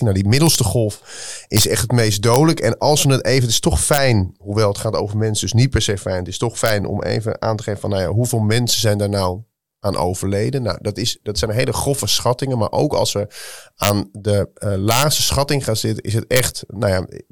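Integer overflow: loud speech peaks drove a sum past the largest integer, and instead of being limited it wrapped to the opposite sign. This happens at 0.47 to 0.55, 1.57 to 1.64, 2.34, 3.94 to 3.98, 6.66 to 6.70, 13.83 to 13.90, 14.91 to 15.03 and 16.36 to 16.40 s. The peaks exceed the limit by only about 0 to 2 dB, yet each one flips across the full range, producing violent cracks much sharper than clipping.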